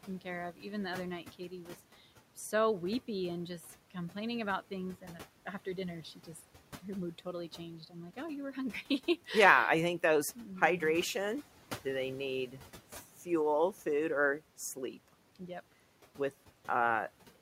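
Noise suppressor artifacts run through the whole clip. The suppressor estimates the steady background frame by frame and pulls down the bands it judges to be noise, here by about 12 dB. The room noise, which sits roughly 19 dB below the speech, dips in the pauses and swells back underneath each phrase.

Speech cut by the noise suppressor occurs at 0.52 to 0.65 s and again at 1.23 to 1.75 s. In both places the suppressor mistook low-level parts of the speech for background and turned them down along with the noise, by as much as about 11 dB. Around a tenth of a second is affected in the first instance and roughly a fifth of a second in the second, and those sounds come across as swallowed and faint.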